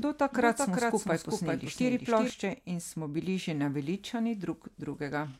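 A doubled audio track runs from the start of this speech clip to 2.3 s, ending just before "in smo bili že". A second full-band copy of the speech trails the original by roughly 400 ms at somewhat lower level, perhaps 5 dB down, with no reverb tail or room colour. It is already present as the clip opens and cuts off abruptly at 2.3 s. This points to a likely cause: the same signal captured twice, once through a slower path.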